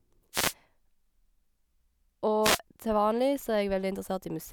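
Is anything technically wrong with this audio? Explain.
Yes. Two wireless microphone noise hits occur, at 0.32 to 0.54 s and 2.42 to 2.59 s. The FM radio link fades as reflected paths cancel, so receiver noise rises, heard as a short swish of static.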